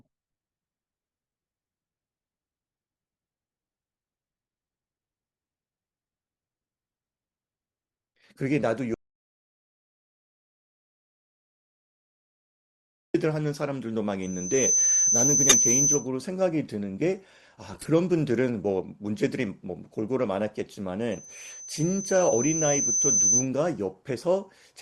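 A speech recording with three kinds of fault. From 8.94 to 13.14 s there is an audio dropout to silence: 4.2 s of silence with no room tone, which sets it apart from a pause in speaking and points to the input likely being lost or muted while recording continued. A loudspeaker feedback squeal rises at 14.22–16.09 s and again at 21.11–23.48 s. It is a single steady 6.1 kHz tone that swells over roughly half a second the first time and about two seconds the second, ending a few dB above the speech. Unlike broadband noise, it stays fixed on one pitch while growing. Two corrupt frames decoded produce brief errors. The first, at 15.49–15.55 s, is the louder of the two, and its short length fits a couple of damaged frames. The second, at 17.73–17.88 s, is quieter and longer, fitting several frames. Their abrupt, frame-length errors set them apart from the gradual build of feedback.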